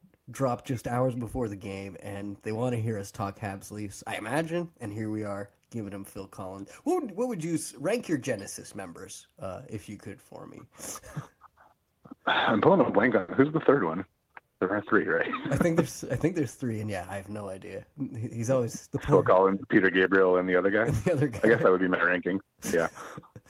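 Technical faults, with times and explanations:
13.19 to 13.30 s, short stall from a late packet: a packet arrived late, so the sound got stretched about 90 ms, nothing lost, just a held bit.
15.54 to 16.85 s, jitter buffer speed-up: the buffer trimmed roughly a tenth of a second of pitch periods, so it runs about 6% fast at unchanged pitch, a little hurried.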